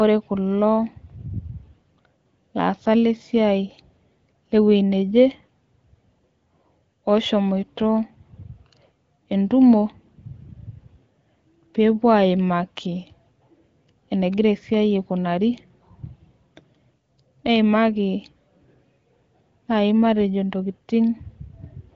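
Nothing stood out on listening to this speech recording.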